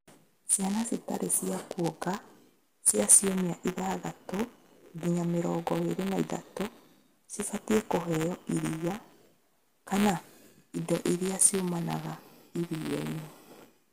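Buffer tearing runs throughout this speech clip, a 172 Hz robotic buzz, fitting a 256-sample buffer, where writer and reader cross, splicing a small slice of audio about 10 ms old into every period.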